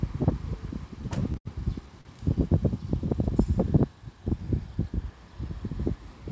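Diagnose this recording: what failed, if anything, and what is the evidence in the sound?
Repeated stalls (stutter) from 1.02 to 1.47 s: late packets on the network emptied the jitter buffer four times, filling about 134 ms, the longest gap 80 ms. The waveform shows repeated held, fading stretches.

A short stall from a late packet at 2.01 to 2.07 s: a 39 ms delay jump starved the buffer, so the sound is held. The spectrogram shows a smeared flat patch below the call codec's 8 kHz ceiling.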